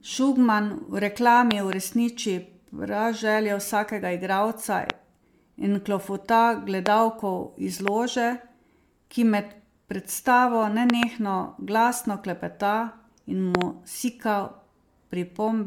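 Speech throughout, with a swirly, hollow, smeared quality and soft, blurred consonant attacks. There's nothing above 19.9 kHz, and the damage sounds worse than a single MP3 pass would leave. It points to generation loss, likely from the audio being run through MP3 at something like 128 kbit/s around five times, each pass requantising on a shifted frame grid so the noise and spectral holes stack up. On top of that are loud pops, roughly 20 dB above the speech, while the talking carries on underneath. There are double pops at 1.51–1.75 s, 10.90–11.05 s and 13.55–13.64 s, and single ones at 4.90–4.92 s (right after "vsakega igralca"), 6.86–6.88 s and 7.88–7.90 s. They're likely voltage transients from a switch, plug, static or driver glitch getting into the signal path.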